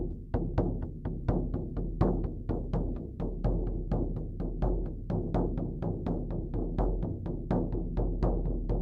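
Nothing here trips the ear at all: the sounds come and go without a single glitch, dropout or hiccup anywhere along the way.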